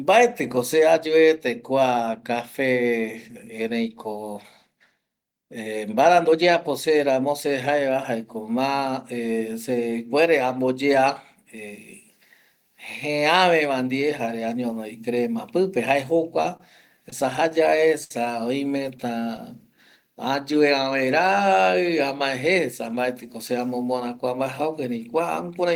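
Right after "añonovi crema pipe jae", at 16.57 to 16.60 s, there's a short stall from a late packet. The jitter buffer ran dry, so the receiver stretched the last sound by 28 ms until the data showed up. Nothing's lost, just a brief held, slightly buzzy moment.

Then from 16.96 to 18.11 s it turns into repeated stalls, a proper stutter. Packets kept arriving late, the buffer emptied eight times, and 149 ms got filled in, with the longest hold at 65 ms. That's about 13% of the stretch, so the speech drags and catches.

From 18.84 to 19.38 s you get scattered short gaps, roughly four of them. Each is a tiny hole, none much over 10 ms, patched by extending the previous sound. It's still clear, just with little ticks and smears along the way.

Finally, 21.73 to 23.17 s, just before "se amomora kua", there's a jitter buffer speed-up. The buffer had built up extra delay, so the receiver trimmed out roughly 100 ms in small pitch-period chunks. 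The speech runs at 106% speed at the same pitch and sounds a bit hurried.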